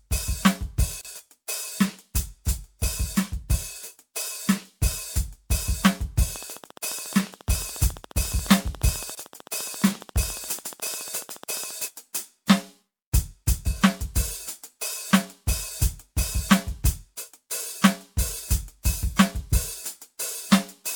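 At 1.01 s, separately encoded pieces were joined with their encoder delay and padding left in, producing a gap at a join: a 34 ms silence cuts the music before it resumes. From 6.36 to 11.72 s, likely interference from nearby equipment injects a train of clicks, some seventy regular ticks at 14.3 per second, peaking about 5 dB above the music. Within that stretch, at 9.15 s, another untrimmed join leaves a 24 ms gap.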